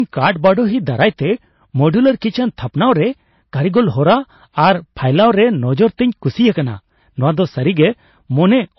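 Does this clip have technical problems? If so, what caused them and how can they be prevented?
Yes. Hard clipping runs through the whole speech clip. The signal was driven about 4 dB past what a stage could pass, so peaks are cut flat. Under one percent of samples hit the ceiling, giving crackle on loud syllables. Keep peaks below full scale.

The audio also has nothing above 5.8 kHz, plus dull, smeared MP3 artefacts. This is likely low-bitrate audio saved at a high bitrate, pointing to a very low-bitrate MP3 re-encoded at a high rate. Re-encoding cannot restore lost detail. Always encode from the original source.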